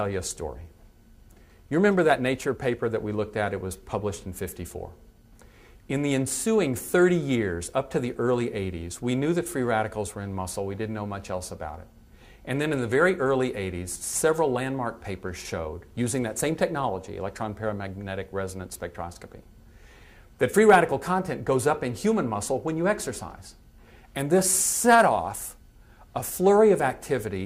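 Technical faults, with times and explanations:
20.69 to 20.78 s, hard clipping: for about 90 ms the peaks are driven about 5 dB past what the stage can pass, so their tops are sliced flat. That sharp corner sprays high harmonics, giving a brief harsh crackle rather than the rounder, warmer thickening of soft saturation.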